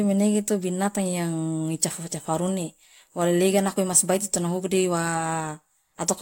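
There are no technical faults to describe in time order in this speech clip.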